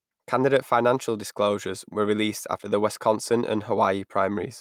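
Speech throughout, with no dropouts, clipping, glitches or other technical faults to be heard anywhere in the signal.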